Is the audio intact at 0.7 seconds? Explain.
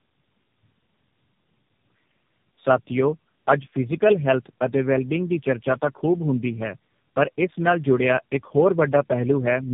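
No. Tandem speech coding affects 0.7 s and the entire clip. The sound points to three low-rate speech coders in a row, each re-encoding the previous one's degraded output, leaving speech rough, muffled and warbly, with nothing above 3.5 kHz.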